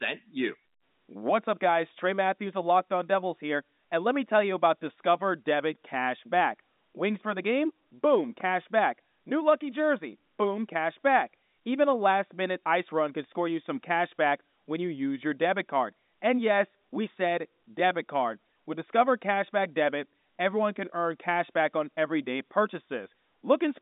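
Nothing goes wrong in this speech clip; it sounds just as a landline call on G.711 telephone coding should, with the narrow phone band sitting between about 200 Hz and 3.7 kHz and nothing at all above 3.8 kHz.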